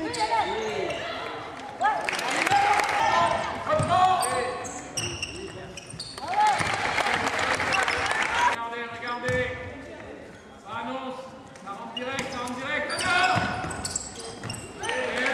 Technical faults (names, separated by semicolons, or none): none